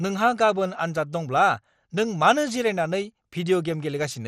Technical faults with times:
0.00-4.27 MP2 compression

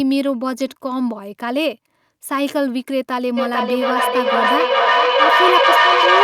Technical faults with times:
3.37-6.23 feedback echo between two devices

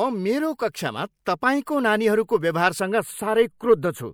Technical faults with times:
1.25 pre-echo
1.65 pre-echo
2.27-2.29 pre-echo
2.80-4.13 channel delay (comb filtering)

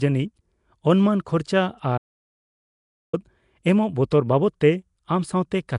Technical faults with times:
0.00-5.79 Nellymoser compression
1.98-3.13 audio dropout to silence
4.11 pre-echo

